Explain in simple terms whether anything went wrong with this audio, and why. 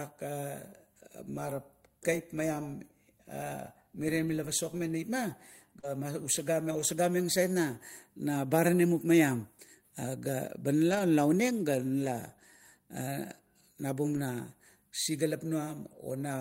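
Two kinds of network problem can be heard in this speech.

Short concealed packet loss occurs twice, at 4.77 to 4.81 s and at 5.79 to 5.85 s. Small pieces of the call arrived too late, so the receiver made up the missing sound by stretching what came just before. This is heard as a brief smear or wobble, and a short consonant may be lost. The sound in these gaps is invented, not the real speech.

A lost packet rebuilt from error correction occurs six times: at 5.83 to 5.85 s, 6.71 to 6.81 s, 8.99 to 9.01 s, 10.91 to 11.01 s just before "oneng ga", 12.05 to 12.07 s just after "oneng ga", and 14.13 to 14.19 s. Here the next packet carried a rough backup copy of the lost one. There is no gap, but those moments sound grainier and noisier than the speech around them.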